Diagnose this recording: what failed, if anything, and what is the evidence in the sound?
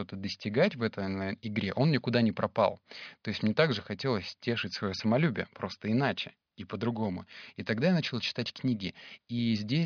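Nothing in the recording points to a failure at any stage of the chain, and the speech signal holds steady and continuous throughout.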